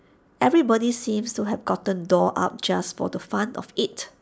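Listening to the speech here, nothing stood out as a technical problem.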